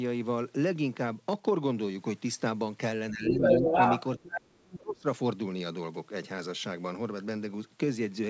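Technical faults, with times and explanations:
3.11–3.41 s, 3.59–3.72 s, 4.20–5.06 s: speech suppressed in double talk. The talker dips by about 10 dB, then slightly, then by about 35 dB at 4.20–5.06 s, almost cutting out. This is likely an echo canceller ducking both voices during overlap. The main voice loses level rather than gaining a second voice.
3.31–4.01 s, 4.18–4.40 s, 4.65–4.77 s: other side's voice leaking through. A separate voice is added over the talker, about 5 dB above it at first, then a little below, then faint. This is likely loudspeaker echo the canceller left behind, and it is heard as extra sound rather than as loss.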